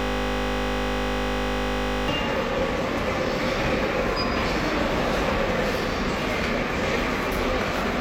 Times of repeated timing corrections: none

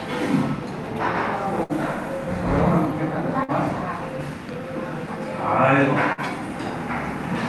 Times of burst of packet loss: 1.63-1.72, 3.43-3.51, 6.12-6.20

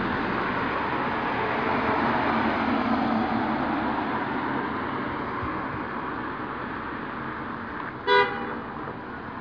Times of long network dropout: none

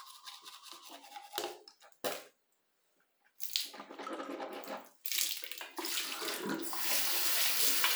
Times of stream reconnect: none

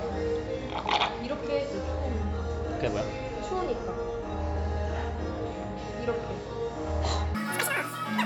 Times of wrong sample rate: 7.35-8.26

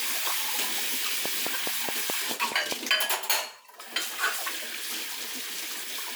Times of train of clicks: 1.25-2.73

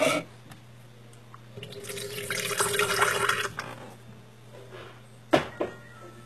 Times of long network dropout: none

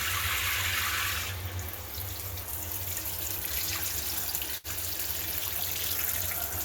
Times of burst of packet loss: 4.57-4.67

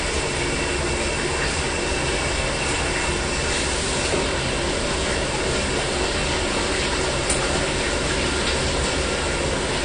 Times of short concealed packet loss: none

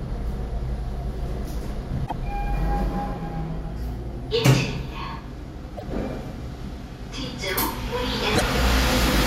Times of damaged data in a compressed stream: 2.03-2.12, 5.74-5.83, 8.32-8.42

